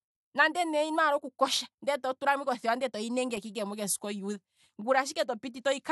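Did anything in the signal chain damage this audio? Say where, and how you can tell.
No, nothing in the signal chain audibly damaged this speech recording. No stage from capture through to playback leaves a mark that can be heard in it.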